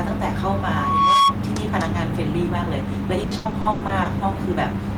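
From 0.50 to 1.36 s, a loudspeaker feedback squeal appears. A 1.1 kHz tone swells over roughly 0.7 s, ending about 5 dB above the speech. From 3.23 to 4.07 s, repeated packet loss makes the speech choppy and robotic. Holes up to 100 ms are patched by repeating sound, covering nearly half the stretch.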